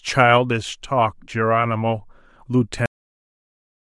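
At 2.86 s the speech hits a cut-off end. It stops in the middle of a sound and drops straight to digital silence with no decay, holding for the final 1.07 s. The last buffers of audio were never written out or played back.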